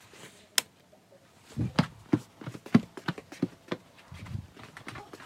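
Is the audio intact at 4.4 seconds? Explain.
No. At 4.4 s, as throughout, the audio is read two samples at a time, running at double speed and a full octave higher. Pairs of samples become single frames.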